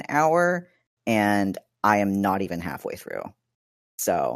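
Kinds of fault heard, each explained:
Nothing stood out on listening to this speech recording.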